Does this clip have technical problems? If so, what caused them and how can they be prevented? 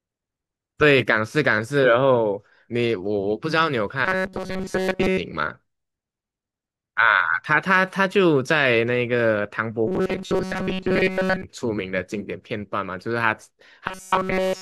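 Yes. Robotic sound from repeated short buffers at 4.05–5.18 s, 9.87–11.43 s and 13.88 s to the end: a metallic 188 Hz buzz, likely from audio arriving too seldom, so about 5.3 ms slices repeat, replacing most of the sound and, in the last stretch, all of it. A spectrogram shows rigid, evenly spaced harmonics at multiples of 188 Hz, and the waveform shows identical short cycles. Prevent it with a larger jitter buffer or faster, steadier delivery of audio to playback.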